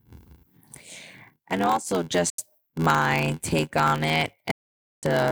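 A speech recording with two faults. One stage hands over shorter blocks than the next stage reads, which fits a 512-sample read, and the shortfall is zero-padded. This block size mismatch (padded) leaves a tiny gap in every block, producing a constant 86.1 Hz buzz and slowing delivery to 0.861 times normal speed. Audio packets likely missed their deadline over the Bluetooth link and were dropped. This Bluetooth dropout silences the output from 2.3 to 2.39 s, right after "and also", and the sound resumes at "my take on it" about 70 ms further along. A second hole runs from 4.51 to 5.03 s after "my take on it", skipping about 441 ms.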